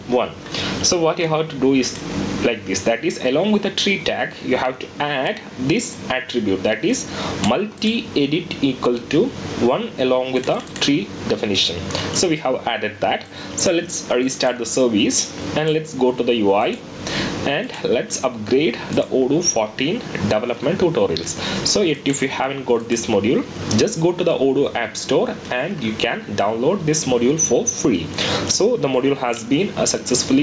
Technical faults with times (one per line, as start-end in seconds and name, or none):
0.00-30.43 gain pumping